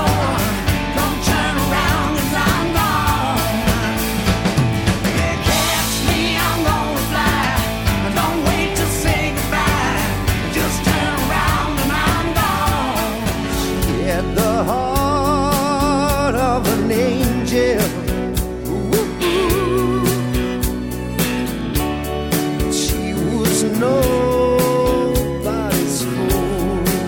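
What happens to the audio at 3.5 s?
Nothing goes wrong at 3.5 s; the audio runs through that moment intact, with no dropout, click or other fault.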